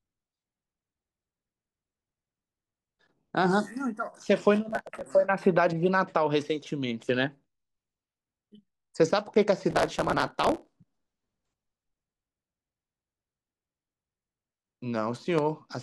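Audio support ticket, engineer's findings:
Gritty crackle bursts over the speech, 4.70–5.04 s and 9.71–10.85 s. Processor overload crackle: CPU repeatedly missing very short buffer deadlines; skipped buffers leave hard-edged gaps.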